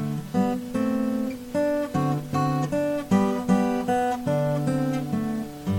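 Across the whole clip there's plainly audible MP3 compression: a watery, swirly texture, with faint detail flickering in and out. The likely cause is a low-bitrate encode, and the damage fits something around 64 kbps.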